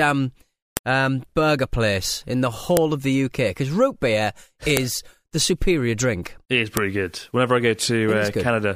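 A sharp snap hits the speech at 0.77, 2.77, 4.77 and 6.77 s, just before "um burger place in" and after "because root beer". This is a file header played as audio. Pieces joined every 2.0 s kept their headers, and those bytes play as a loud click.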